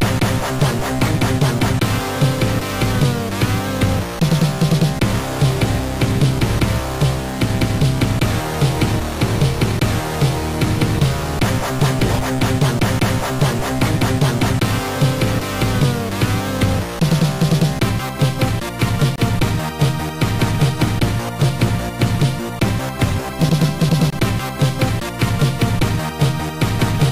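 At 19.16 to 19.18 s, and again at 24.10 to 24.13 s, the sound drops straight to a block of digital silence, each hole lasting about 23 ms. There's no fade on either side, so the sound cuts out and back abruptly, which reads as a short hole. Both holes are the same length, which fits a 1024-sample buffer that wasn't filled in time and went out as zeros.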